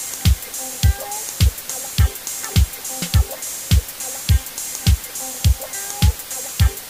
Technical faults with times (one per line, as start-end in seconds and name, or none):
0.00-6.90 low bit depth with dither